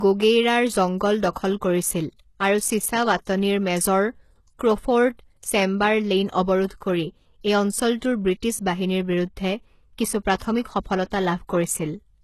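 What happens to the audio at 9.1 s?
At 9.1 s, as throughout the clip, the speech has nothing above 12.3 kHz, likely low-bitrate audio saved at a high bitrate: an earlier low-rate encoding's losses survive re-encoding.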